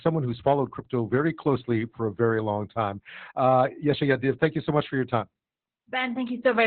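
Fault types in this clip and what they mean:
Opus voice compression, throughout: the speech is squeezed into a narrow band with nothing above 4.4 kHz, and its excitation is coded coarsely by the SILK predictive coder, leaving it muffled, hoarse and faintly robotic, damage that fits a bitrate near 8 kbps.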